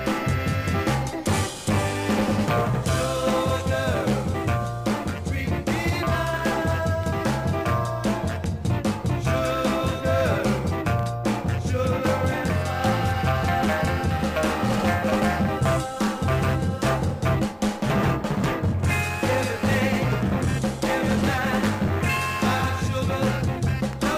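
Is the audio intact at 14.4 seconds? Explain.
No. At 14.4 seconds, as throughout the clip, there is crude rate conversion. The sample rate was raised without a proper filter by repeating the nearest existing sample, which fits a 32 kHz to 48 kHz conversion in a 3:2 ratio. The uneven repeat pattern adds stray tones that are unrelated to the sound. They sit roughly 25 dB below the signal and come through as a gritty, inharmonic fizz that follows loud and high content.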